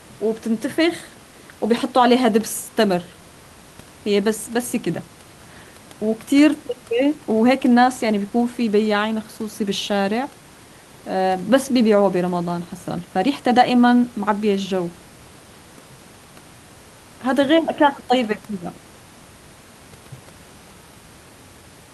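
Nothing stood out on listening to this speech recording; the only background is ordinary room noise, sitting about 24 dB below the speech.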